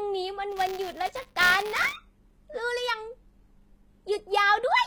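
Throughout the speech, the sibilants sound gritty and lispy, and the treble is present but synthetic. The likely cause is HE-AAC compression at a low bitrate, around 20 kbps. Band replication has rebuilt the top from copied lower bands, so the treble is bright but misaligned, not dull as a plain low-pass would leave it.

From 0.49 to 1.96 s, a robotic 200 Hz buzz rides on the speech. This is buffer tearing: writer and reader overlap within each period, so a small slice of every buffer, about 15 ms old, is spliced in with hard joins. Unlike dropouts, there are no gaps, only a steady rattle while sound is present.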